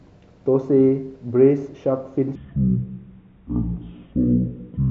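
From 2.35 s to the end, the speech abruptly drops a full octave, about 12 semitones lower, and slows to half its pace, so it turns deep, dragging and sluggish. This is a wrong sample rate fault. The samples are read out at half the rate they were captured at, with no conversion, so speed and pitch fall together by the same factor of two. That fits 48 kHz material being played back at 24 kHz.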